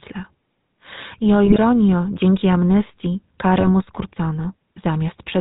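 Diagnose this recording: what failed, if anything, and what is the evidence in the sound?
GSM full-rate codec, throughout the speech: a buzzy, gravelly roughness with nothing above 4 kHz, consistent with 13 kbps pulse-excited vocal-tract coding at the codec stage.

GSM bit errors, 1.46–1.59 s (before "dzięki amnestii") and 3.60–3.71 s (after it): brief squawking, gargled breaks where corrupted filter, pitch or gain values reached the decoder from the radio link.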